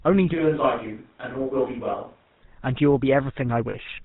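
From start to finish the speech has a buzzy, gravelly roughness, with nothing above 4 kHz and a clearly audible grain. That is the sound of the GSM full-rate codec, which fits a 13 kbps channel. It rebuilds the voice from a model of the vocal tract driven by regularly spaced pulses, keeping only part of the excitation, so the fine detail is replaced by that characteristic rasp.

At 0.35 s the voice abruptly turns roomy and hollow. It is thinner in the bass, about 5 dB quieter, and sits over a faint background of room noise far below the speech. At 2.42 s it snaps back to its earlier presence. The sudden change in both directions suggests a switch to a distant microphone, likely because the close microphone's signal dropped out and a more remote pickup, such as a camera's, filled the gap.

From 1.92 to 1.95 s, during that distant stretch, the sound briefly freezes into a rough, metallic ring. 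A second, longer ring follows from 3.70 to 3.75 s. These are lost GSM frames, and the lengths fit one missing 20 ms frame and then two. The decoder covers each gap by repeating the last good frame's settings, with the level falling from the second lost frame on. Both gaps are short enough that the ring never fades fully to silence.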